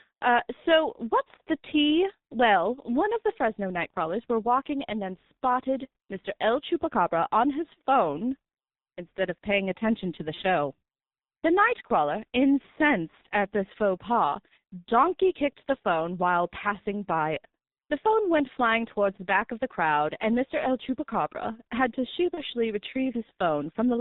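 Throughout, the speech passes through a G.723.1 codec at heavy compression, with the hoarse quality that fits its 6.3 kbit/s mode. Nothing above 4 kHz survives, so the speech is muffled and hoarse, and consonants smear together.

At 10.34–10.41 s, just after "paying attention to the", at 11.87–11.93 s, just before "incensed at this faux", and at 22.34–22.43 s, just after "had to", VoIP packet loss was concealed by the speech codec. Each gap fits a single lost 30 ms frame, which the decoder filled from its last state, producing a brief buzzy or noisy, fading smear.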